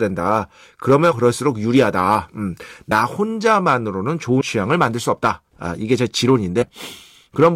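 Compressed frames skipped at 1.11–1.13, 2.91, 4.40 and 6.61–6.63 s: the speech jumps ahead roughly a tenth of a second or less, leaving an audible join each time.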